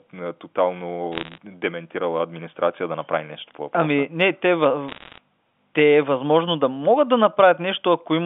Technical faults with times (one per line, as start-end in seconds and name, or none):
1.12-1.38 bit errors on a digital phone line
4.88-5.18 bit errors on a digital phone line